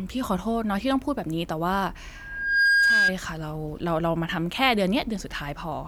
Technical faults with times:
2.14-3.14 loudspeaker feedback squeal

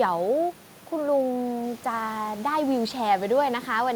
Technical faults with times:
none

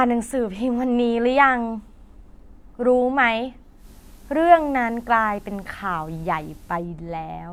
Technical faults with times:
3.75-6.87 digital radio blending to analogue

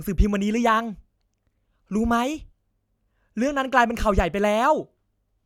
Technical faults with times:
none

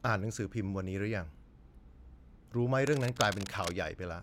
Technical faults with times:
2.80-3.81 cable scratch noise

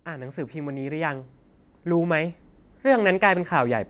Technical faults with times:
0.05-3.90 automatic gain rising

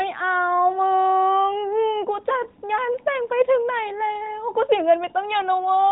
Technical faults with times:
none

